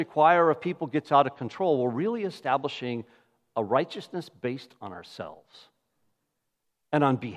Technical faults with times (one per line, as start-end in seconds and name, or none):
none